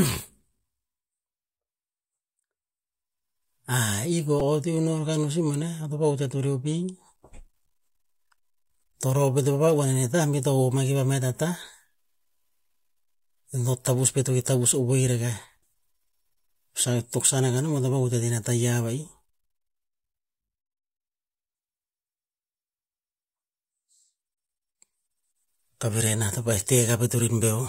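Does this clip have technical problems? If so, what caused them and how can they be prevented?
Yes. At 4.40 s a repeated buffer fault gives a brief buzzy click: audio arrived late, so the device replayed one tiny 2.67 ms segment three extra times, which fits a 128-sample buffer. A few milliseconds of speech are lost. Larger buffers or higher-priority audio processing prevent this.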